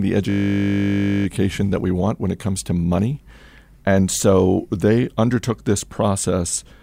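A system hang loop runs from 0.3 to 1.26 s in this speech clip, just before "that we want when": a 20 ms slice of audio repeats exactly, producing a steady 50 Hz buzz, as the sound hardware kept cycling one ring buffer while the system froze.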